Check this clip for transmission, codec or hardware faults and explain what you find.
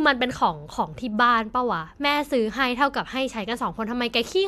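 Nothing to flag here: the speech comes through without any transmission, codec or hardware trouble that a listener would pick up on.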